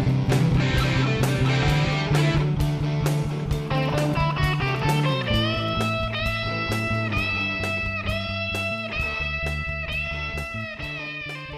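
No technical faults can be heard anywhere in this audio. Nothing in it marks a moment that needs a timestamp or a closer listen.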